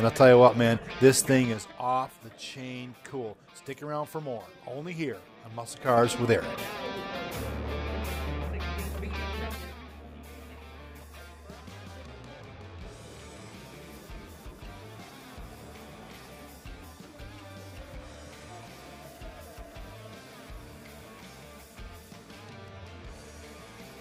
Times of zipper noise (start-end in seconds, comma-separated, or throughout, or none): 1.37-1.79